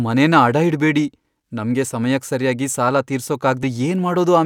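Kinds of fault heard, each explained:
Compressed frames skipped: at 3.63 s the speech jumps forward, losing about 150 ms, roughly five frames of what sounds like a 32 ms frame length, because those frames were missing or rejected by the decoder as damaged. Unlike a dropout, no silent gap is inserted; the sound simply resumes further along, with the skipped portion lost.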